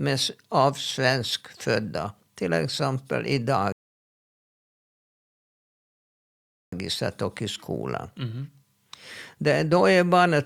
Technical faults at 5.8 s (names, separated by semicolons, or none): rebuffering stall